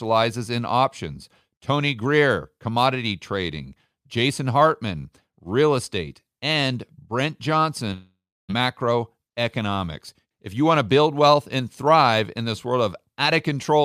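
At 7.93 s the speech melts into a fading buzz, then silence, and comes back at 8.51 s with 0.56 s gone, likely a long network dropout.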